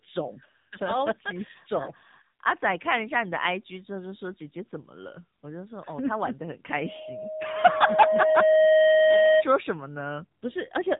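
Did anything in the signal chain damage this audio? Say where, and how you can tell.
Yes. The codec stage damaged it throughout: this speech passed through the AMR narrowband mobile codec. Nothing survives above 3.8 kHz, and the voice has a buzzy, synthetic edge with pulse-like roughness, the sound of a vocal-tract model rebuilt from sparse excitation pulses at a low bit rate, consistent with a mode near 7.4 kbps. Plain telephone band-limiting would dull the top without adding that artificial buzz, and the buzz is what marks it as AMR-NB.

A loudspeaker feedback squeal occurs in the acoustic path between microphone and speaker, from 6.78 s to 9.44 s. A single steady tone at 626 Hz swells over roughly two seconds until it sits about 10 dB above the speech, then stops at 9.44 s. The loop gain exceeded one at that frequency, so it fed itself. A tonal hum or interference would start at full level, and this one grows, which identifies it as feedback.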